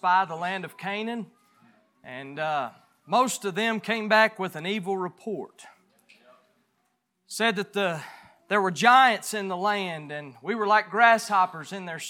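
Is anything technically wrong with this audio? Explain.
No, nothing technically wrong can be heard in this audio. No dropouts, distortion or other faults show up anywhere in the clip.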